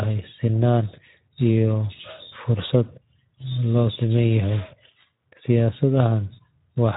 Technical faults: Speex codec

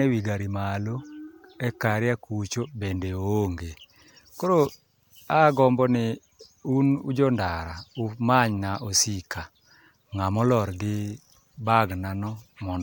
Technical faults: none

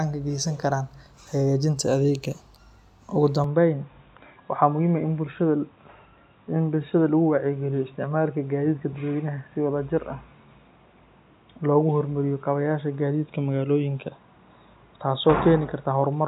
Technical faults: input switched to a poorer device

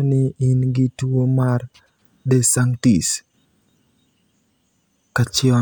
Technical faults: none

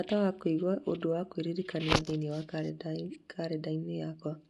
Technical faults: Bluetooth LC3 compression

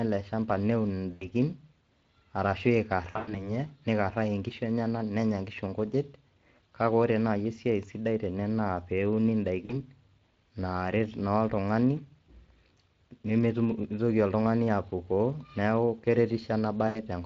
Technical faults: Speex codec; VoIP packet loss concealed by the speech codec

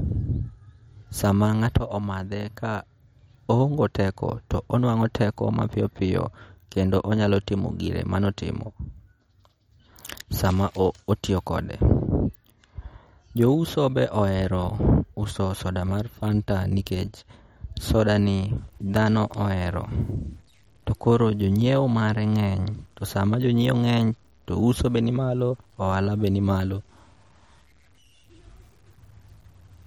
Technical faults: MP3 compression; low bit depth without dither

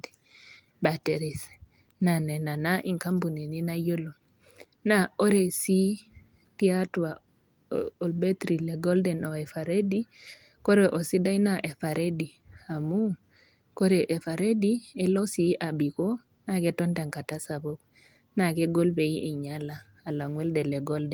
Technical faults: none

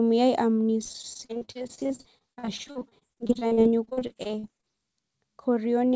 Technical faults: repeated packet loss (robotic sound)

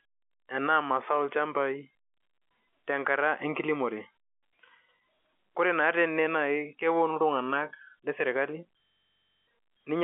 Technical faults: system hang loop

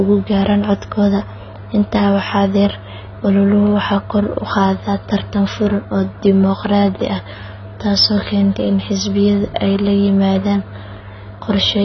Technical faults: AAC compression

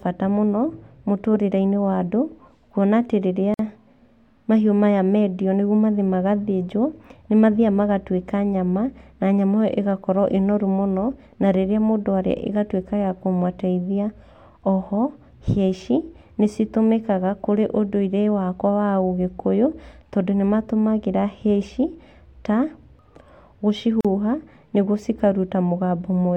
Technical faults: gap at a join of encoded pieces

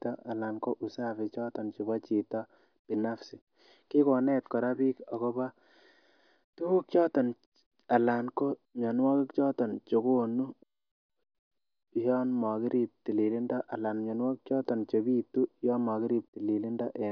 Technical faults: none

